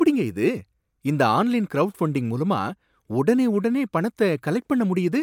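No dropouts, glitches, distortion or other technical faults are audible anywhere in this speech recording.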